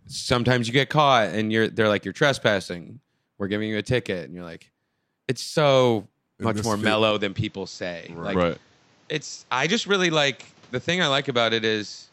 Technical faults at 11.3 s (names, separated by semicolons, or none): input switched to a poorer device